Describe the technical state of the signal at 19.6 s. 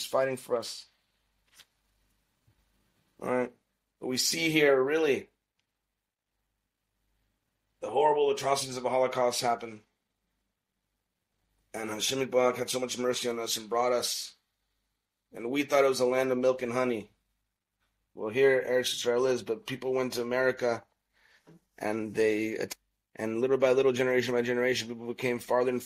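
At 19.6 s the signal runs intact, with no dropout, distortion or other fault to be heard at that point.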